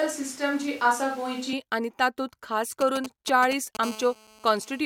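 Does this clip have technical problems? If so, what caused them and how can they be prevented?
Yes. From the start to 1.53 s, the speech sounds roomy and hollow, with thin bass. A switch to a distant microphone is the likely cause. Keep the close microphone recording throughout.

From 2.81 to 3.77 s, GSM signalling bursts give fairly loud galloping ticks and short 217 Hz buzzes. The audio circuit rectifies a nearby 2G phone's radio bursts. Keep phones away from the recording gear or in flight mode.

From 3.83 to 4.81 s, a steady GSM phone buzz runs at 217 Hz, about 19 dB below the speech. It comes from a nearby phone transmitting in a call. Use shielded cables and keep phones well away.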